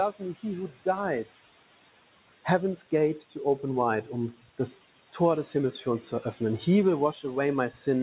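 Noise suppressor artifacts run through the whole recording. The suppressor estimates the steady room noise, which sits about 17 dB below the speech, and pulls those bands down by about 16 dB frame by frame. Between phrases the background sinks away and then returns under each phrase.

From 3.18 to 3.36 s there is speech cut by the noise suppressor: the gain rule mistakes a soft stretch of speech for noise and drops it by as much as about 14 dB. Roughly a tenth of a second is affected, and that portion sounds swallowed. A second, longer instance runs from 5.71 to 6.41 s, with a shallower drop of about 10 dB spread over about a fifth of a second in total. Quiet segments there fade toward the background rather than vanishing outright.

The audio contains nothing above 4 kHz, which along with the coding noise points to a G.711 A-law call path at 64 kbps.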